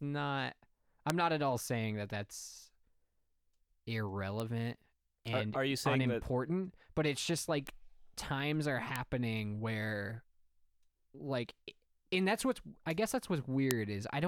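Single bits flipped in the digital path, each pushing one to three samples away from the waveform by a power of two before the signal snaps back. The result is a bit error spike: a sharp, broadband tick unrelated to the speech, at 1.1 s (peaking near about -13 dBFS), 4.40 s and 7.67 s (about -19 dBFS each), 8.96 s (about -13 dBFS), and 13.71 s, the loudest at about -7 dBFS.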